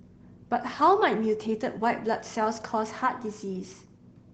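Nothing goes wrong anywhere in this speech recording, which comes through the Opus voice compression in the usual way.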